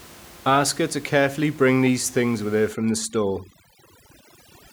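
From 2.73 s to the end, overdone noise removal clamps bands near the noise floor, so the background drops and breaks up into twinkling specks.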